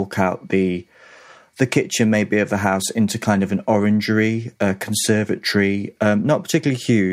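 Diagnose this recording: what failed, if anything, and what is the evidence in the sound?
Nothing failed; no stage in the chain shows a fault.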